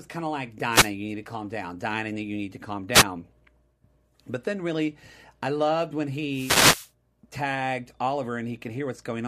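Three wireless microphone noise hits break into the speech, at 0.68 to 0.93 s, 2.93 to 3.04 s and 6.29 to 6.91 s. Each is a brief swish of static as the radio link fades and receiver noise surges. On a spectrogram each shows as a broadband vertical smear, and on the waveform as a burst of hash riding over the signal.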